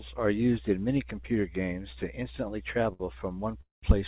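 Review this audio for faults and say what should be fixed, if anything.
A short stall from a late packet occurs at 2.93 to 3.03 s, right after "computer games to instantly". The last sound is held for about 66 ms while the receiver waited, then the audio resumes with nothing lost, only 66 ms late. On a spectrogram this appears as frozen, horizontally smeared harmonics; on the waveform, a short repeating stretch. A larger jitter buffer would absorb this lateness.

A call audio freeze runs from 3.61 to 3.86 s. The final sound continues as a fading buzz, then about 160 ms of silence follows before the audio resumes where it stopped, 215 ms late and with nothing missing. The likely cause is packets held up in transit until the jitter buffer ran empty. A spectrogram shows a decaying smear followed by a blank column; the waveform tapers to a flat line. Better network stability and adaptive jitter buffering would prevent it.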